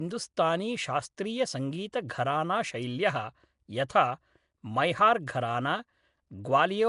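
Throughout, the speech has a rough, hissy, underwater smear, likely from Nellymoser compression. The spectrogram shows patchy noise-filled bands and nothing above 10.6 kHz, which fits a 44 kbps stream.

At 1.92 s and 3.89 s, pre-echo puts a 10 ms wash of hiss just ahead of sharp attacks and blunts them. The waveform shows noise rising before each onset.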